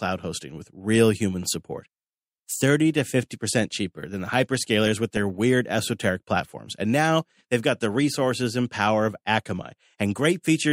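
At 4.79 s, right after "cheaper than the", DAB burbling sets in until 5.18 s, just before "weird esoteric platforms". Weak reception let bit errors, around a fifth of a percent, slip past error correction into the MP2 data, so corrupted samples put short blips of noise into single sub-bands and corrupted scale factors make sub-bands jump in level for up to a frame. It hits again briefly at 9.63 to 9.73 s, after "resources and power of".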